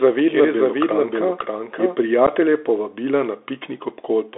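The speech runs through a Bluetooth CVSD headset codec from start to finish. Its band is held to about 300 Hz to 3.6 kHz. Nothing higher survives, so the sound is thin and boxy. CVSD codes each sample as a single up-or-down step, and the step size adapts to the signal. The damage is plainly audible. A granular hiss sits under the speech. Fast, loud, high-pitched sounds come out rough and scratchy, which fits a 64 kbps link.

A doubled audio track is already under way when the clip opens. It lasts until 1.96 s. A second full-band copy of the same speech trails the original by about half a second. It is about 5 dB quieter. It has no reverb tail and no room colour. It simply repeats. At 1.96 s it stops abruptly. The likely cause is the same audio being captured twice, once by a slower path.

At 2.27 s there is unconcealed Bluetooth headset packet loss. A hole about 11 ms long opens in the speech. 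That points to a few lost voice packets between headset and phone. Nothing fills the gap. Silence or an idle pattern took its place. The edges are hard, so the dropout is heard as a short, sharp break. On this CVSD link the sound returns quieter for a moment.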